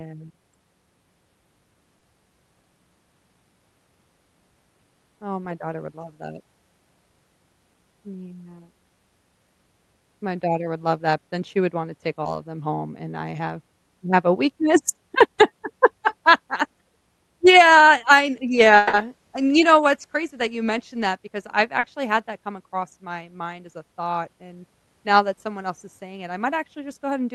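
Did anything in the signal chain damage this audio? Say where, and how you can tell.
Yes, at the network stage. Short concealed packet loss appears at 1.99–2.03 s, 12.23–12.27 s and 21.79–21.85 s. Each is a brief smear or wobble lasting 20, 20 and 40 ms. The receiver filled the missing audio by extending the last sound, then blended back.

A longer gap follows at 18.77–18.95 s. For about 160 ms the sound turns into a fading buzz or hiss, then real audio resumes without what was lost. There is no true silence. This is likely a long network dropout, hidden by extended concealment.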